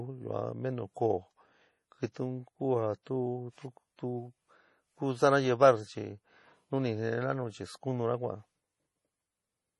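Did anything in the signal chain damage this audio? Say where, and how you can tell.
Yes, at the codec stage: throughout the speech nothing survives above 11.4 kHz, and the audio sounds watery and swirly with metallic chirps on s sounds. That is likely MP3 compression, heavily starved, pointing to about 32 kbps. A plain low-pass filter would dull the treble but leave no flickering, swirling texture.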